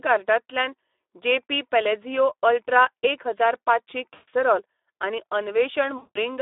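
Speex codec damage runs through the whole of this speech recording and is plainly audible. The voice is confined to a telephone-style band of roughly 300 Hz to 3.6 kHz, and it sounds hoarse and grainy because the CELP coder has too few bits to rebuild the excitation faithfully, which fits a bitrate around 11 kbps. VoIP packet loss concealed by the speech codec then strikes twice, at 4.13 to 4.29 s and at 5.97 to 6.21 s, covering about 140 ms and 180 ms of lost audio. Each time the decoder keeps extrapolating its last pitch and spectral filter with falling gain, so the voice smears into a fading buzzy, coloured tone. Because each decoded frame depends on the one before, the speech stays weak and distorted for a short while after the packets resume.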